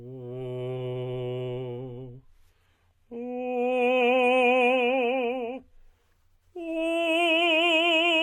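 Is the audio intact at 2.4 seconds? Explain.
No. From 1.79 to 5.79 s the music drops to a lower-bitrate adaptive stream, with nothing above 14.8 kHz, a thinner, synthetic-sounding top and more codec artefacts.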